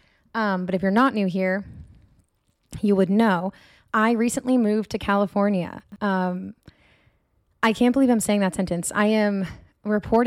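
At 0.97 to 1.07 s the speech overdrives a stage by about 2 dB, so the peaks are sliced flat in hard clipping. The squared-off tops add high harmonics, heard as a brief crackly roughness on the loudest moment.

Between 5.80 and 5.96 s a 40 ms chunk of audio is written late and plays three chunks after its proper place, so the chunks are out of order. Nothing is missing, but the stretch sounds jumbled, with three abrupt joins.

Hard clipping returns at 7.63 to 7.67 s, with the overload reaching about 3 dB, and again at 10.13 to 10.16 s at about 2 dB. Each time the peaks are flattened, adding a short burst of harsh crackle.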